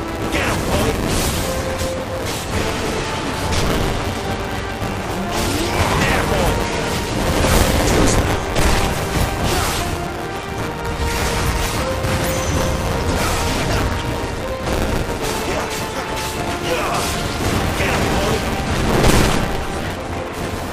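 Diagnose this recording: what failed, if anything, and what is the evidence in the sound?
The failure is at the driver or buffer stage. It is buffer tearing, and it runs through the whole recording. A steady robotic buzz sits on the sound at 172 Hz and is present only while there is signal. That rate fits a 256-sample buffer. The writer and the hardware reader have slipped and now cross inside each period. A small slice of every buffer, roughly 15%, holds audio about 10 ms old, with hard joins on both sides.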